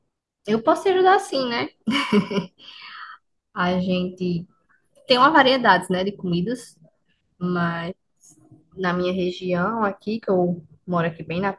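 No technical faults are audible anywhere in the speech recording.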